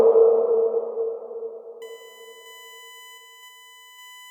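From 1.82 s to the end at 4.30 s, a USB whine sits about 25 dB below the sound: a fixed-pitch tone on a 1 kHz series, strongest at 3 kHz. The bus's 1 ms frame current is leaking into power or ground. Unlike mains hum, its pitch is far above 50 or 60 Hz.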